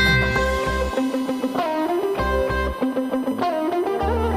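USB whine runs from start to finish: a steady tone fixed at 1 kHz, sitting roughly 20 dB below the wanted signal. Current drawn by the USB bus in 1 ms frames repeats a thousand times per second, and that periodic load is leaking into the audio path through shared power or ground. Its pitch never drifts, so it reads as a thin, constant whistle riding underneath everything else.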